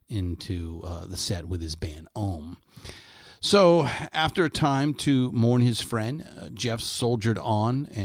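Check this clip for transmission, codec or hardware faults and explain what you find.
No transmission or hardware faults.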